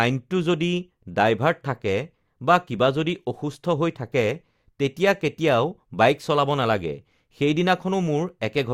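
No technical faults can be heard anywhere in this recording of speech. Nothing in the audio calls for a time marker or an explanation.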